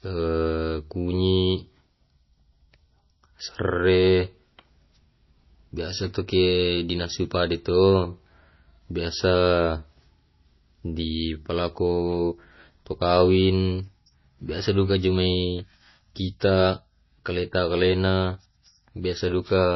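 MP3 compression throughout: the speech sounds watery, likely from an encoder starved of bits, which fits a bitrate near 24 kbps.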